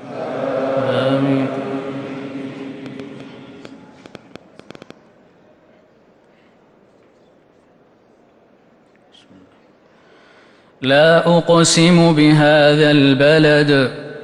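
From 2.86 to 4.92 s, a train of clicks: about ten matching pops at an uneven 5.4 per second, unlike one isolated click; likely interference.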